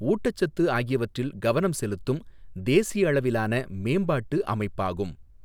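No dropouts, clicks, distortion or other transmission faults are audible anywhere in the recording.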